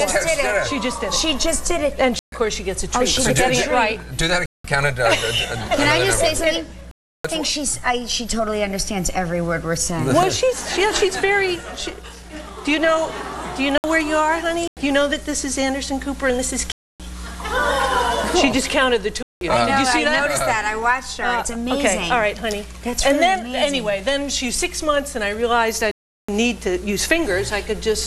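The audio drops to blocks of digital silence eight times, at 2.19, 4.46, 6.91, 13.78, 14.68, 16.72, 19.23 and 25.91 s. Gaps run 62 to 372 ms. Several lengths suggest unfilled output buffers.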